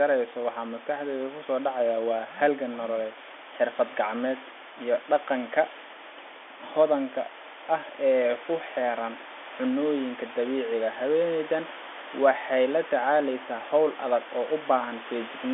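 Nothing is technically wrong with this speech recording. It carries the narrow sound of G.711 telephone coding, with the band running from roughly 300 Hz to 3.5 kHz and nothing audible above about 3.7 kHz.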